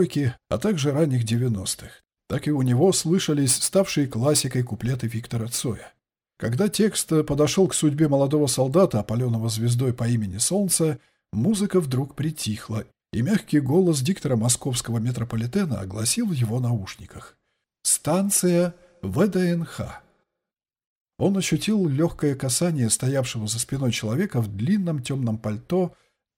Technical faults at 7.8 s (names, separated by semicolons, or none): none